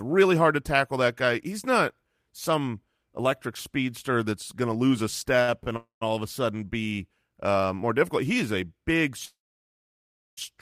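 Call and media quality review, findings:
Short stalls from a late packet at 5.42–5.50 s and 5.64–5.68 s. Sound held about 57 ms, then 25 ms. Jitter buffer briefly ran dry and stretched the last bit; nothing lost.

Call audio freezes at 5.76–6.03 s (249 ms, ~130 ms silent) and 9.25–10.39 s (1.12 s, ~1 s silent). Fading buzz into quiet, then resumes where it stopped; likely jitter buffer underrun from held-up packets.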